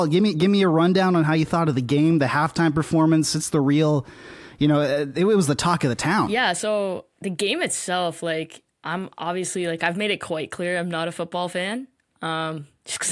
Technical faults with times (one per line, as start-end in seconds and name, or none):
none